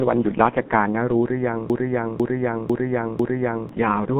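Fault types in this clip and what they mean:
G.723.1 codec: A very low-rate telephony codec, consistent with about 6 kbit/s, squeezes the audio into long frames with a slowly updated voice model. The speech is confined to a narrow phone band, with nothing above roughly 3.8 kHz, so it sounds heavily muffled and hoarse, and consonants are smeared.
Broken-record loop: Most likely the stream stalled and the last buffered fragment was replayed in place of new audio. From 1.70 s to 3.69 s, a half-second piece of speech repeats exactly four times back to back, and whatever should have played there is missing.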